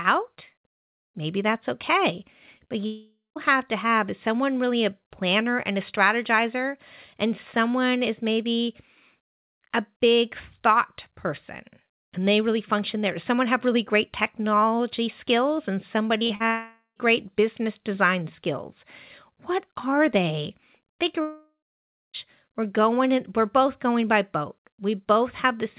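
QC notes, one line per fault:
2.58–2.72 s, repeated packet loss (robotic sound): just after "that's okay", three packet gaps occur, the longest gap 22 ms. Each hole is patched by repeating the preceding sound, so about 60 ms turns choppy.
2.86–3.38 s, long network dropout: about 0.5 s of speech never plays, likely from a network outage. A fading buzz from repeating the last sound decays into 0.19 s of silence before speech returns with that stretch gone.
16.18–16.42 s, repeated packet loss (robotic sound): right after "great technology skills and", three packet gaps, the longest 43 ms, are filled by repeating earlier sound. Roughly 100 ms comes out clipped and robotic.
16.46–16.98 s, long network dropout: half a second of speech is lost just before "business design skills", likely because the network stalled. The patched-in sound fades to 0.12 s of silence, and speech resumes with the gap missing.
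21.22–22.16 s, long network dropout: about 0.92 s of speech is lost, likely to a network break. A fading buzz from the repeated last sound gives way to 0.6 s of silence before the audio comes back.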